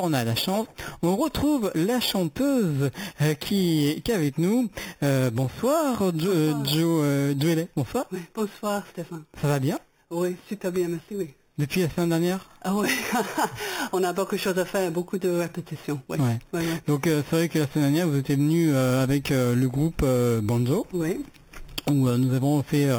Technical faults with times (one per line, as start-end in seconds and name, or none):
0.00-22.98 imaging from sample-and-hold upsampling